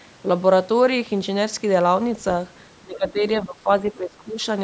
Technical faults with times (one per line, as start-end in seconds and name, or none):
2.83-4.37 speech suppressed in double talk